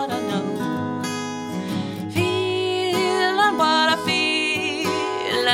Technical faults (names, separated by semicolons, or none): none